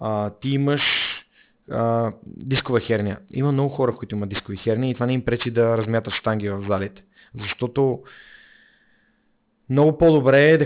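Aliasing throughout: speech energy above 4 kHz folds back as gritty, metallic sibilance about 15 dB down, which fits an unfiltered drop to 8 kHz sampling.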